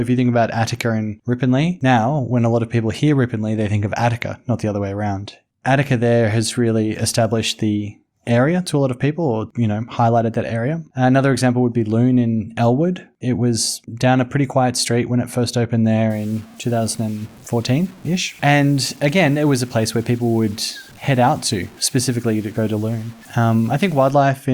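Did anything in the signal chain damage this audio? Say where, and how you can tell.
Yes. From 16.1 s to 24.1 s the speech turns grainy, with distortion that tracks the signal and sits roughly 30 dB below it. This is low bit depth without dither, likely from a sample-format conversion truncating to about 7 bits.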